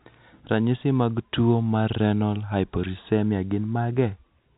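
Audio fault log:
No fault to log; the speech carries the narrow sound of ordinary telephone coding, with nothing above 3.8 kHz.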